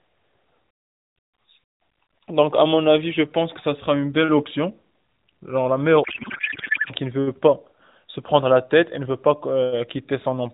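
From 6.04 to 6.92 s, a codec payload misread turns the speech into garbled warble. This fits octet-aligned AMR frames being unpacked as bandwidth-efficient, which misplaces every field.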